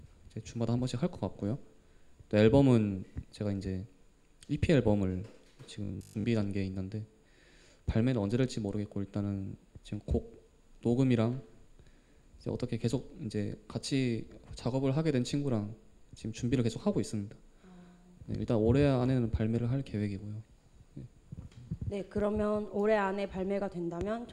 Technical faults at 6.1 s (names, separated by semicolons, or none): robotic sound from repeated short buffers